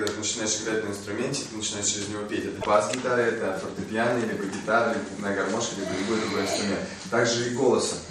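The audio has damaged data in the compressed stream from 2.58 to 2.67 s: the decoder misreads corrupted frames and loses sync, producing a brief glitch that appears as a waveform discontinuity.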